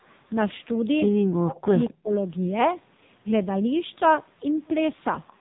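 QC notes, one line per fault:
Throughout: AMR narrowband mobile codec, heavy damage. At a low bitrate, which fits AMR-NB at 5.9 kbps, the speech turns buzzy and synthetic, and nothing above 3.8 kHz passes.
1.30–1.75 s: speech suppressed in double talk. The speech dips sharply, roughly 40 dB at worst, for nearly half a second. The likely cause is the echo canceller muting both talkers.
1.85–1.94 s and 5.27–5.33 s: echo leak. A faint copy of the speech returns 231 ms late, about 20 dB down, then about 30 dB down. It likely leaks from a loudspeaker.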